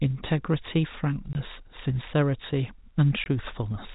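Packet loss filled with silence cuts this speech clip twice, from 1.33 to 1.35 s and again from 3.24 to 3.26 s, each gap lasting 20 ms. At both points, stretches of the stream never arrived and the receiver inserted digital silence, so the sound drops out abruptly with hard edges. The 20 ms length fits two 10 ms packets. The audio comes through telephone-style G.711 coding, with nothing above about 4 kHz.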